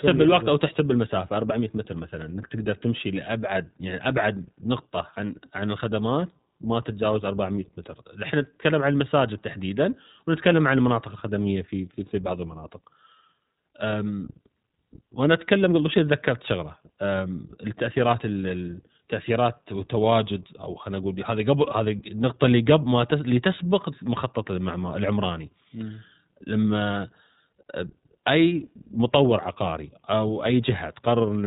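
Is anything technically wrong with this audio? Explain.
Yes. Throughout the speech, an iLBC codec has squeezed the signal into a narrowband channel, coding each short frame's excitation on its own, which fits 20 ms frames at 15.2 kbps. Nothing above 3.8 kHz survives, so the speech sounds muffled and plainly rough, with a synthetic edge.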